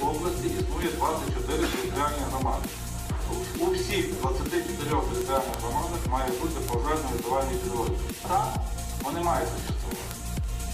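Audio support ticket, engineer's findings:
Word clock ticks, 0.16 s to 10.6 s: sharp single-sample clicks roughly every 0.15 s, uneven strength. Unlocked digital input drifting around 150 ppm off the sender's clock, slipping a sample each time.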